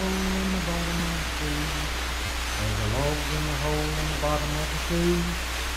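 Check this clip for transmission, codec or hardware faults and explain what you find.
Two repeated buffer faults are present, at 1.0 s and from 2.26 to 2.29 s. New audio arrived late, so the device replayed its last block, which fits a 10 ms buffer. The first piece sounds twice, the second four times, each heard as a brief buzzy stutter with hard joins.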